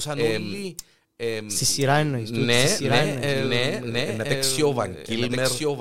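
Doubled audio track throughout: the speech recurs about a second later, about 5 dB quieter, likely from a slower capture path or an out-of-step edit.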